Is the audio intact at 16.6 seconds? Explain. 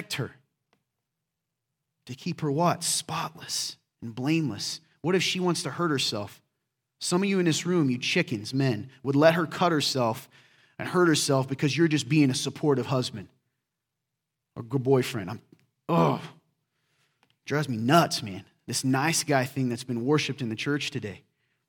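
Yes, at 16.6 seconds the speech is intact, with no dropout, click, distortion or other audible fault.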